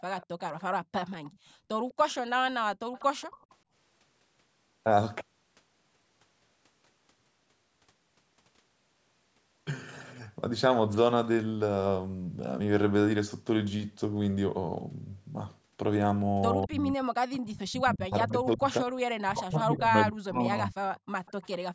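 From 0.2 to 1.36 s, 1.9 to 2.15 s and 2.93 to 3.55 s there is an echo leak: a faint delayed copy of the speech trails it by about 0.2 s, roughly 25 to 30 dB down. It is likely a loudspeaker's echo canceller letting residue through. On a spectrogram it shows as a weak ghost of the harmonic bands, shifted right.

Short echo scraps recur at 16.61 to 16.67 s and 17.32 to 17.39 s. Meanwhile, from 16.66 to 20.77 s, speech suppressed in double talk sets in, likely because the canceller clamped down while both sides spoke. For about 3 s in total the talker dips by as much as 30 dB or breaks up. The waveform shows the envelope pinched into uneven notches, and the spectrogram shows the upper bands thinning out.

At 21.05 to 21.11 s the background is gated by the echo canceller. The room sound falls by about 32 dB for roughly 70 ms and then returns. It appears as a near-silent gap in the waveform and a blank vertical stripe across the spectrogram, up to its 8 kHz ceiling.

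A last echo leak runs from 21.26 to 21.58 s, again about 0.2 s behind the speech and roughly 25 dB down.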